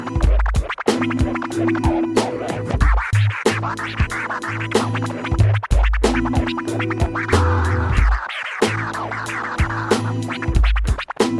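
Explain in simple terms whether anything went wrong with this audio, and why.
Nothing went wrong with this audio. Listening closely, no moment stands out as a technical problem, so there is nothing to point to or explain.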